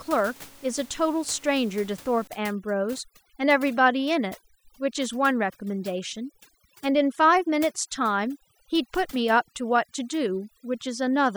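From about 2.27 s to the end, overdone noise removal takes hold: the denoiser clamps bands near its noise estimate, leaving twinkly near-silence, with the room noise underneath about 24 dB below the voice.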